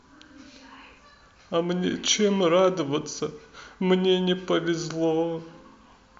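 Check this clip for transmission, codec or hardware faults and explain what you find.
Checking the clip turns up no faults to explain.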